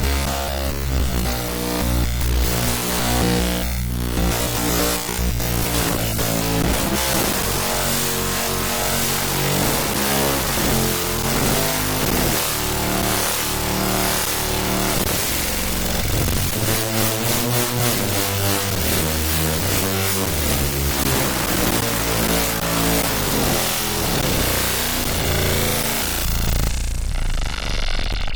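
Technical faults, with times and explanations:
26.53–28.33 s: jitter buffer speed-up. Tiny pitch-period slices were cut repeatedly, about a tenth of a second in total. Audio runs 5% faster at unchanged pitch, sounding rushed.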